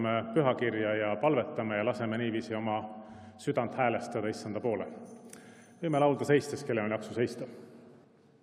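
No dropouts, glitches, distortion or level problems are audible anywhere in the clip.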